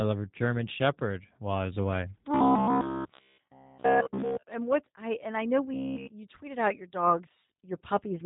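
G.729 codec damage runs throughout: nothing passes above 3.8 kHz, and the rough, synthetic texture fits an 8 kbit/s model-based speech coder. Robotic sound from repeated short buffers appears from 2.35 to 4.43 s and again from 5.74 to 6.10 s. It is a rigid metallic buzz at 66.8 Hz, most likely from about 15 ms of audio being looped while fresh audio is skipped. Most of the first stretch and all of the second are affected.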